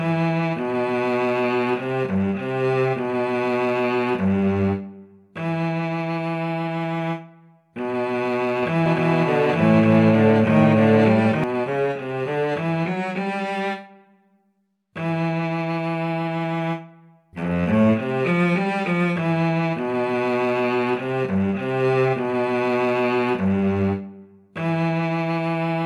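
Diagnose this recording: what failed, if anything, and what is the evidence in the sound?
From about 8.86 s to 11.44 s there's a doubled audio track: a second, full-band copy of the sound trails the original by roughly a second, at about the same level. It has no decay or room colour, and it cuts in and out abruptly at those edges. That points to the driver or buffer stage, or an edit. Most likely a slower second capture path got mixed in, or two copies ended up stacked out of step.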